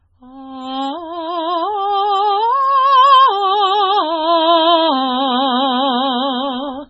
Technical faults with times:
0.00-6.89 MP3 compression

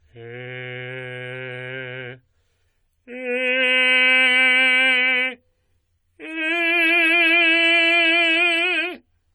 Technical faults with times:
0.00-9.34 generation loss

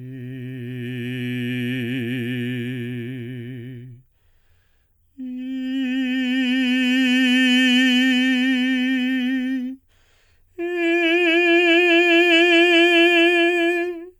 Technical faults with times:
none

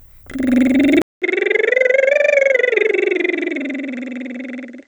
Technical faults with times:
1.02-4.87 input switched to a poorer device

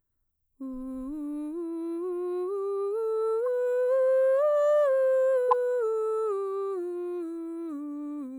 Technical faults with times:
3.46 corrupt frame decoded
5.48-5.53 corrupt frame decoded

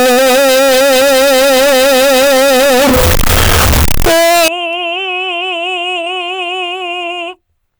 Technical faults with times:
0.00-4.48 float read as integer

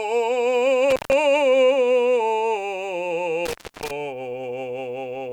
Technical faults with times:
0.90-1.13 intermittent contact
3.46-3.91 intermittent contact

